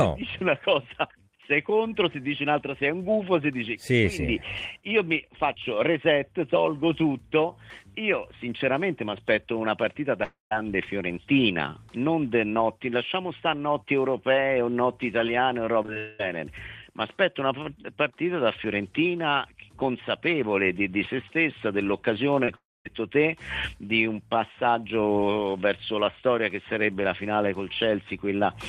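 A stall in delivery, likely a long network dropout, left gaps at 10.23–10.53 s, 15.98–16.21 s and 22.55–22.87 s. Each time the last sound is stretched into a fading buzz, which falls into silence for about 140 ms and 230 ms in the first and third gaps before the audio resumes with that stretch missing. Short concealed packet loss, where 20 ms packets arrived too late, caused brief smears and wobbles at 15.83–15.86 s, 15.86–15.90 s, 15.94–15.98 s and 22.45–22.49 s. These cluster just before the second and third dropouts.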